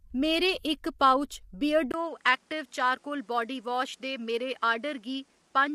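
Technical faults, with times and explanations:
Throughout: low-delay AAC compression. The speech sounds rough and grainy, with noise between the harmonics and a thin, synthetic top band. This is likely AAC-ELD, at a rate that fits about 32 kbps. Its short frames resolve pitch harmonics poorly, so the damage is plainly audible.
1.92 s to the end: input switched to a poorer device. A short silence of about 20 ms marks the switch. After it, nothing reaches above 11.6 kHz, so the sound turns duller. A new noise floor appears, roughly 40 dB below the speech, while loudness stays about the same. This is likely a change to a narrower-band microphone.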